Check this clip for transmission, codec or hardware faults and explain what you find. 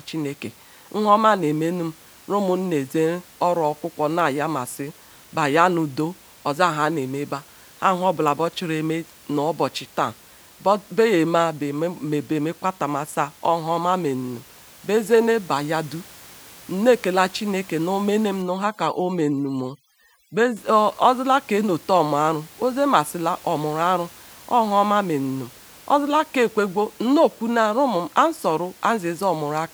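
One fault is audible, from 18.42 to 20.56 s: the gaps between syllables collapse into near silence dotted with twinkling specks. This is overdone noise removal. A noise reduction stage set far too aggressively is pushing individual frequency bands down or off whenever they sit close to its noise estimate, so the quieter parts of the voice are cut away along with the room noise, which elsewhere sits about 26 dB below the speech.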